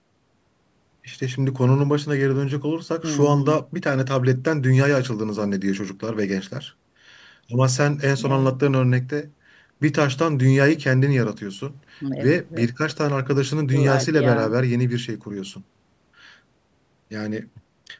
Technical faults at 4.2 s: none

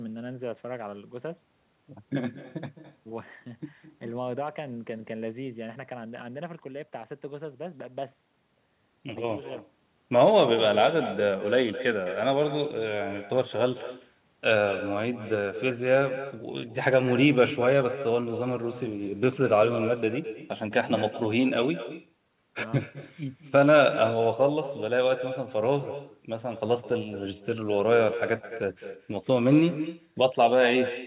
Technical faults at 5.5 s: echo with no canceller

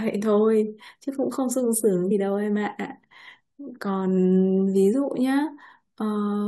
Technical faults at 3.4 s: none

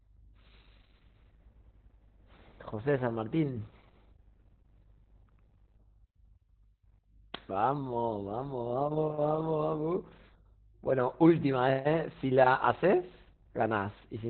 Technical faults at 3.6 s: Opus voice compression

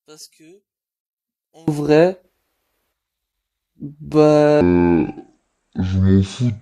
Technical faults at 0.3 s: one channel inverted

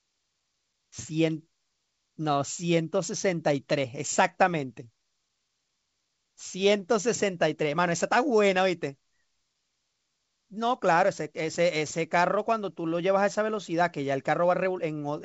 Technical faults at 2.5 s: none

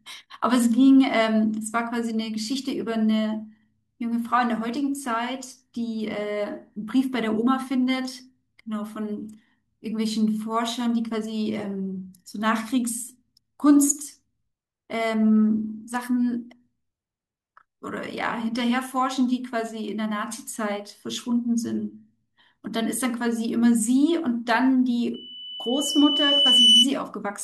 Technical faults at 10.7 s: none

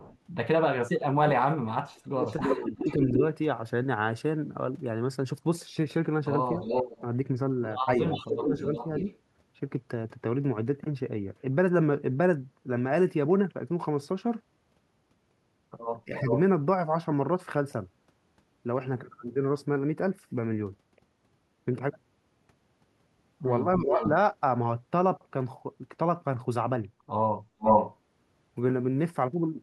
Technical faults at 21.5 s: none

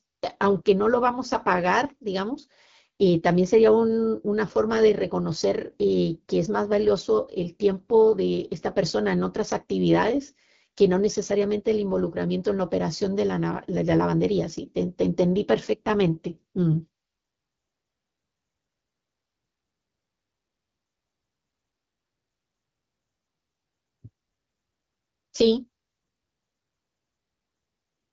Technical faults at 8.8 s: AMR wideband (HD Voice) codec

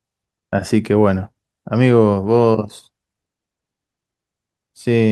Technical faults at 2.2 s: none

